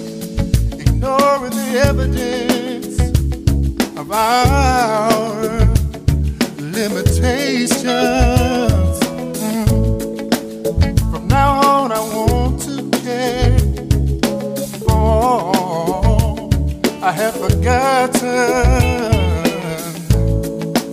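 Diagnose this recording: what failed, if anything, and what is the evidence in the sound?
Nothing failed in this recording, and there is no evidence in the sound of any fault.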